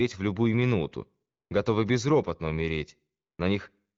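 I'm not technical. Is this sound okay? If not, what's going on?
Yes, this sounds okay.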